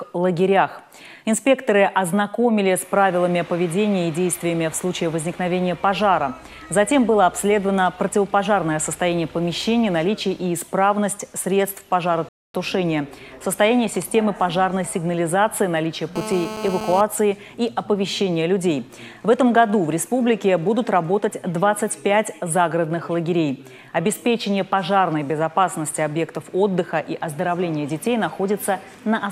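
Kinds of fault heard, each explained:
Rebuffering stall: The player ran out of downloaded audio and paused until more data arrived. From 12.29 to 12.54 s the sound drops to silence for about a quarter of a second, then continues from the exact point where it stopped. That makes it a stall rather than a dropout: no material is missing, and the clip simply runs 0.26 s longer, whereas a dropout would skip ahead and lose whatever fell in the gap.
GSM phone buzz: A 2G handset transmitting nearby pulses its radio 217 times a second, and the audio circuitry rectifies those bursts into sound. Between 16.16 and 17.01 s a hard, raspy buzz at 217 Hz sits about 9 dB below the audio. It holds steady throughout, as during a call. Its rough, harmonic-rich edge and 217 Hz rate set it apart from the smoother 50 or 60 Hz mains hum, and it bears no relation to the sound itself.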